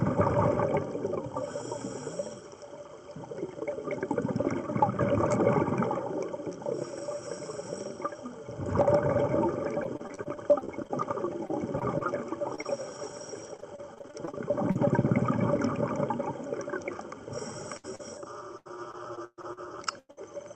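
From 9.83 to 14.85 s there is repeated packet loss (robotic sound): many brief holes, none longer than 38 ms, are filled by stretching the preceding sound, which turns it choppy. A spectrogram shows repeated smeared, frozen slices. It returns from 17.53 to 20.35 s with fewer, longer gaps of up to 127 ms.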